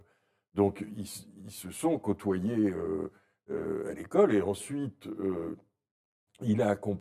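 From start to finish, the speech carries channel delay (comb filtering): one channel arrives about 10 ms late, and when the two are folded to mono, the shared content cancels at evenly spaced frequencies, the first near 50 Hz and then roughly every 100 Hz above it. The result sounds hollow and phasey, as if spoken down a tube. A spectrogram shows fixed, regularly spaced dark horizontal stripes through every syllable.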